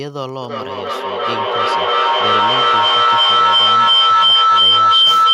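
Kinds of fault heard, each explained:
Feedback howl: from 0.42 s to the end of the clip, a microphone is picking up a loudspeaker carrying the same call, so each pass around that loop comes back louder rather than decaying. The returns narrow onto the frequency the loop favours, here a tone around 1.5 kHz, repeating roughly every 300 ms at the loop's delay and climbing to about 15 dB above the speech, never breaking off because nothing interrupts the loop.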